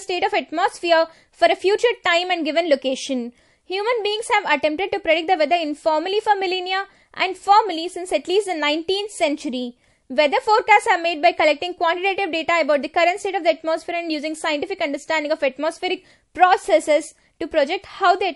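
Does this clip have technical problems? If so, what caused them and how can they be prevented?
Yes. Throughout the speech, there is plainly audible damage that points to MP3 compression as the likely cause. Nothing sounds above 11.3 kHz, and weak frequency components flicker on and off between frames, giving s sounds a watery, swirly chirp. The cut-off and the damage fit a bitrate around 50 kbps. A simple low-pass filter would dull the treble without that frame-by-frame swirl. Encoding at a higher bitrate, or keeping a lossless copy, prevents it.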